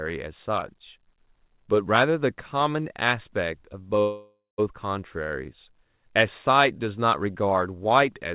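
From 4.0 to 4.6 s, a call audio freeze, likely from a starved jitter buffer: sound smears into a fading buzz, then about 170 ms of silence, resuming intact. The spectrogram shows flat streaks thinning to a blank gap.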